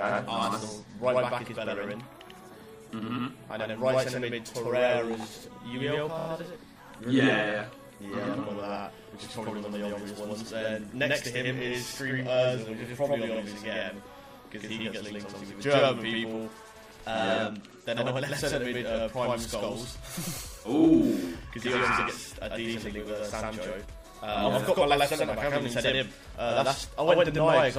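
Channel delay (doubling) runs through the whole clip. One channel arrives about 93 ms behind the other, which fits a 4096-sample buffer at 44.1 kHz. When the two are folded to mono, the late copy does not blend. It stands apart as a distinct slap, a second hit at equal level trailing every onset, so the sound seems doubled rather than merely thickened.

MP3 compression damage is plainly audible throughout, and its harshness suggests a low bitrate, likely around 64 kbps. The encoder has too few bits, so it trims the top of the spectrum and drops quieter frequency components. Those components flicker in and out between frames, which gives the audio a watery, swirling texture. Bright, noisy content takes on metallic chirps, and sharp attacks lose their edge.

Repeated frames first appear from 6.18 to 6.26 s. A block of about 26 ms, consistent with a single MP3 frame, plays three extra times, so the sound stutters in a rapid judder and the clip gains about 78 ms. 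A second repeat follows at 13.34 to 13.39 s, where a 52 ms block, about two frames, plays once more and adds 52 ms.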